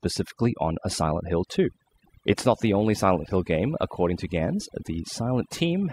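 Overdone noise removal runs through the whole speech clip: a noise reduction stage set far too aggressively pulls individual frequency bands down or out whenever they sit near its noise estimate. The background drops and breaks up into twinkling specks, while softer vocal detail vanishes.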